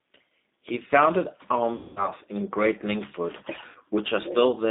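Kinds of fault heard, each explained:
G.729 codec: the whole clip runs through an 8 kbit/s VoIP codec that rebuilds the speech from a vocal tract filter, pitch predictor and a few pulses per frame. The line band sits at roughly 200 Hz to 3.7 kHz, so it sounds thin, and the rough, slightly synthetic texture comes through plainly.
VoIP packet loss concealed by the speech codec: twice, packets went missing and the decoder kept extrapolating from its last pitch and filter while the level sank. There's a longer gap of about 210 ms around 1.75 to 2.11 s and a short one of about 60 ms near 3.69 s. Each comes out as a stretched, fading sound, and the speech stays weak for a moment afterwards.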